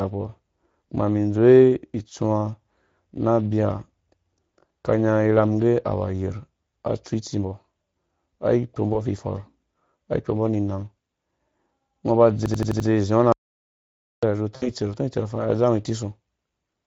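Speex codec coding runs throughout at 16.8 kbps, and its damage is plainly audible: the excitation is coded with few bits, so speech sounds hoarse and noisy.

VoIP packet loss concealed by the speech codec appears at 8.93–8.99 s. About 20 ms of audio is missing, which fits a single lost frame. The decoder extends the previous pitch and filter, and the result is a brief smear as the gain fades.

A system hang loop at 12.46–12.89 s repeats one 85 ms slice of audio five times, a machine-gun stutter at 11.7 Hz. That loop length fits a 4096-sample buffer, and little or no audio appears lost.

An audio dropout to silence at 13.32–14.23 s cuts the sound to digital silence with no room tone for about 0.9 s. The likely cause is a lost input link or a mute.

VoIP packet loss concealed by the speech codec returns at 14.56–14.71 s. About 60 ms is missing, consistent with three lost frames, and the extrapolated sound fades.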